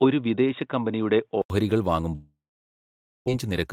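Input switched to a poorer device, 0.0 to 1.5 s: the opening speech has nothing above 3.8 kHz, so it sounds dull and boxy. It is slightly quieter, with a faint added noise floor. An 80 ms silence separates it from the fuller sound that follows, likely an input change between microphones.

Long network dropout, 2.15 to 3.30 s: the speech smears into a fading buzz, then about 0.89 s of silence. When sound resumes near 3.3 s, about 0.6 s of audio is gone, likely because packets stalled and the receiver's timing shifted by around half a second.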